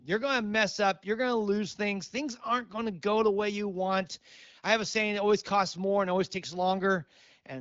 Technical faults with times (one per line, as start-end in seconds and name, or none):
none